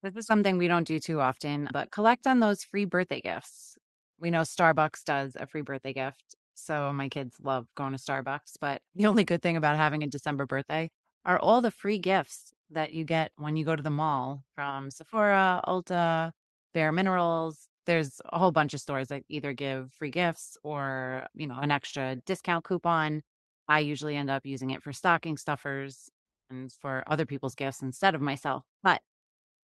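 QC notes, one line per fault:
No faults are present in this speech recording, which carries the ordinary character of a WebRTC call path with the high end stopping around 12 kHz, consistent with an Opus codec at a moderate speech bitrate.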